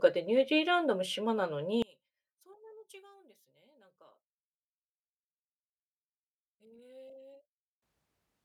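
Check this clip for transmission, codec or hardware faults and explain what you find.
One fault is present, a polarity problem in the speech from 1.82 s to 7.82 s. Over that span the level of the mono sum falls by about 30 dB and the speech nearly disappears, leaving a faint residue. The likely cause is one channel inverted: with one stereo channel's polarity reversed, everything common to left and right cancels on summing, so the centred speech and its low end drop out and only the small inter-channel difference remains.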